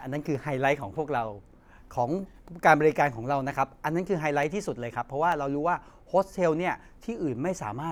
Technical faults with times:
0.35 dropped samples
3.23 dropped samples
4.43 dropped samples
5.32 dropped samples

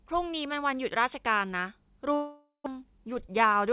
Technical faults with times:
2.14-2.68 long network dropout
2.76-3.66 jitter buffer speed-up

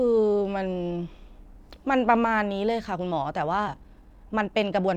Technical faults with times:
2.89-4.97 time-stretched section

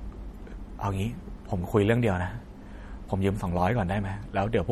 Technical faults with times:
0.00-4.72 MP3 compression

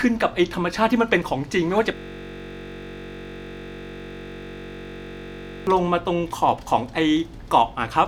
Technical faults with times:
1.95-5.67 system hang loop

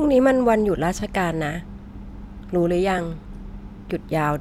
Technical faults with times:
1.00-1.02 repeated buffer
2.98 repeated buffer

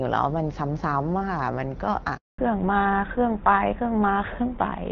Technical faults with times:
2.16-2.38 handover gap
2.38-4.91 fallback to narrowband

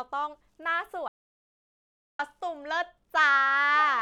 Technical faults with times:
1.08-2.19 audio dropout to silence

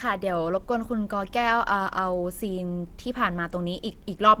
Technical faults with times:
0.00-4.40 Opus compression

